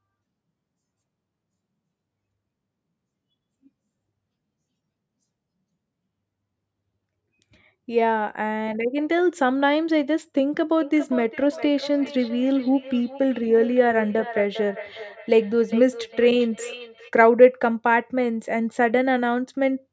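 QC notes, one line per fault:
10.81–17.13 s, feedback echo between two devices. The speech returns at a steady gap of roughly 0.4 s, thin and ringing, at about 12 dB below the speech. A second device in the room replays the call, the microphone catches it again, and neither echo canceller removes the other's output.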